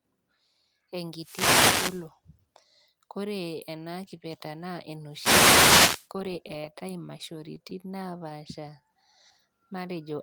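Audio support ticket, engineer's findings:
Wireless microphone noise hit, 1.16 to 2.09 s and again 5.10 to 6.09 s, the second one right after "ena kipeta naa". Both sound like a swish of static over the speech. Probable component is the analogue FM radio link: reflections cancelling the carrier, so receiver noise climbs up through the audio. Both hits last about a second, so check antenna placement and line of sight first.

Repeated stalls (stutter), 6.31 to 8.32 s. The speech drags in a series of 16 tiny hitches. Gaps are short, 22 ms at most, with about 168 ms of continued sound in total, roughly 8% of that stretch, and nothing actually lost. Probable component is the jitter buffer on the receive side, running dry over and over as packets arrived late and getting patched by stretching the last sound each time.

Jitter buffer slow-down, 8.61 to 8.92 s. Speech slows to about 87% speed with pitch unchanged, adding 48 ms, so the sounds there come out drawn out. 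Same receiver buffer, now deliberately repeating pitch periods to rebuild its reserve after the stalls just before. Looks like a knock-on of the same network delay trouble.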